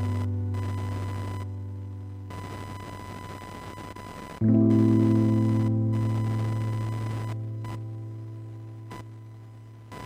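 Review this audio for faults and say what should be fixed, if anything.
Computer activity noise runs through the whole clip: a buzzing, chirping layer pulsing at around 1 kHz, sitting about 15 dB below the sounds. It rises and falls with the computer's workload rather than with the recorded material. That pattern points to processor, graphics or mouse load currents disturbing the ground shared with the audio circuitry, which injects the interference into the signal path. To prevent it, record through an external USB or isolated audio interface, away from the computer's internal converters.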